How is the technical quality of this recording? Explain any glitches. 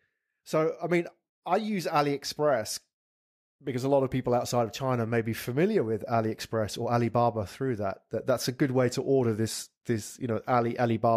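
Nothing in the recording stood out as a technical problem on listening.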